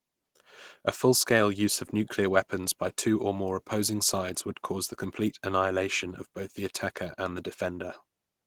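Throughout, Opus voice compression at a rate suggesting 16 kbps leaves the speech hoarse and slightly robotic. A spectrogram shows smeared, blocky energy above 8 kHz.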